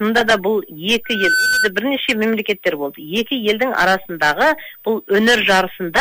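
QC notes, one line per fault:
1.04–1.72 s, loudspeaker feedback squeal: a 1.5 kHz tone swells up over about a third of a second until it's roughly as loud as the rest of the sound. The mic was hearing its own speaker, and that one frequency kept looping back louder until it stopped.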